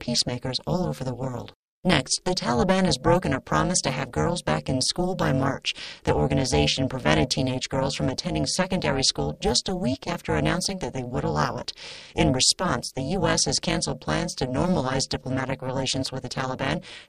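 From start to finish the speech carries overlap-add ripple. The frames were resynthesised with an overlap whose windows do not sum to constant gain, so the level dips by about 60 dB once per frame, around 400 times a second, producing a harsh, metallic buzz with extra tones.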